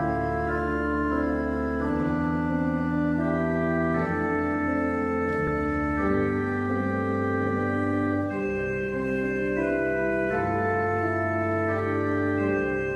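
At 5.47 s the sound jumps ahead slightly: compressed frames skipped, a gap of roughly 10 ms that fits one lost frame.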